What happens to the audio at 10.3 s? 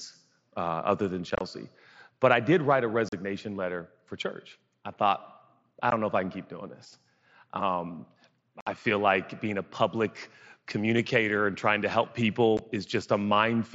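Nothing goes wrong at 10.3 s; the speech continues intact through that moment, carried over the Bluetooth mSBC headset path as it is throughout.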